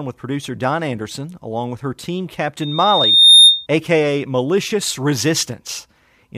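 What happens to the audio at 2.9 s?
A piercing 3.7 kHz tone swells over roughly 0.7 s to about 15 dB above the speech, lasting from 2.61 to 3.67 s, just after "along with her team". This is loudspeaker feedback squeal: the microphone recaptured its own loudspeaker, and loop gain exceeded one at that frequency.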